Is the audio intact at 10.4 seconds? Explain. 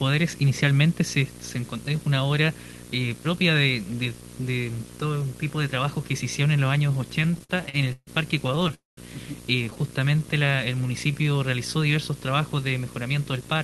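No. From 10.01 to 11.24 s the sound drags, running at about 89% speed with unchanged pitch and stretched sounds. This is a jitter buffer slow-down, where the receiver repeated pitch periods to build reserve, adding 138 ms. Under it sits a steady 60 Hz video or display buzz with hash, roughly 15 dB below the sound, from a screen or video cable coupling into the audio.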